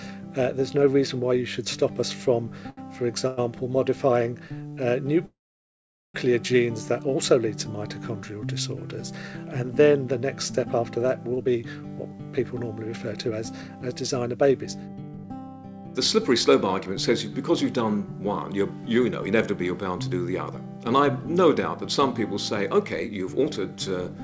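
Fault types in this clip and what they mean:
Short stall from a late packet, 2.70 to 2.79 s: one packet arrived late and the jitter buffer ran dry, so the receiver stretched the last sound for 74 ms, then resumed at the same point. Nothing is lost, but that sound is held too long.
Call audio freeze, 3.27 to 3.39 s and 5.25 to 6.16 s: packets were likely held up in transit, emptying the jitter buffer. The last sound continues as a fading buzz for 100 ms, then 888 ms, the longer one falling silent for 790 ms before resuming.
Jitter buffer speed-up, 11.33 to 11.64 s, 12.12 to 15.48 s, 20.11 to 20.67 s and 23.08 to 23.57 s: with excess audio queued, the receiver repeatedly removed tiny pitch-period pieces, so the sound hurries at unchanged pitch, reaching 144% speed in the first burst.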